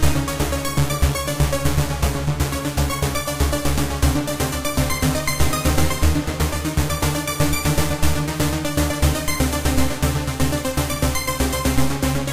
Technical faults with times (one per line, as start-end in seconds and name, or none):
none